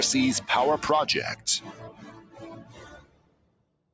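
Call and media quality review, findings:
Noise suppressor applied to music or sounds: level pumping throughout, gain swinging around 20 dB. Speech-tuned suppressor in the call path treating steady tones and tails as noise. Unlike compressor pumping, attacks mostly pass while sustains and ambience sink, giving a thin, fluttering result.

Sound cut by the noise suppressor: 2.2–2.36 s, drop of about 9 dB; 2.95 s to end, drop of about 13 dB. Same suppressor gating sustained material. Unlike a dropout, the sound dips and decays early rather than vanishing. Band limited to 8 kHz by call mic processing.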